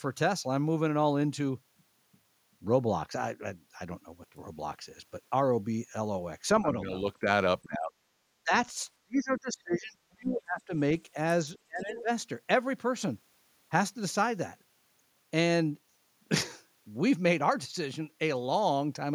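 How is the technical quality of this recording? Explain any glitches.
The recording has clear glitches during overlapping talk. Speech suppressed in double talk: the echo canceller likely mistook both talkers for echo and turned everything down. The voice dips slightly at 6.62–6.72 s, then sinks deeply, by roughly 30 to 40 dB, at 7.62–8.52 s, 8.98–10.72 s and 11.66–12.09 s. Other side's voice leaking through: the echo canceller likely left loudspeaker residue in the microphone signal, so brief, faint scraps of a second voice, well below the main speech, appear at 9.36–9.40 s and 11.55–11.59 s.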